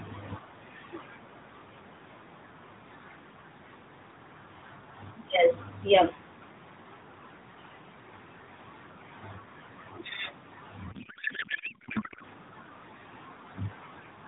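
A speech clip carried over the AMR narrowband mobile codec. Nothing above 4 kHz comes through, and the light synthetic edge fits the top 12.2 kbps mode. From 10.92 to 12.24 s there is a codec payload misread. The speech turns into garbled noise and warble that barely tracks it. The decoder is reading the frame bits with every field shifted. That fits octet-aligned AMR being unpacked as bandwidth-efficient. Clean speech returns at 12.24 s.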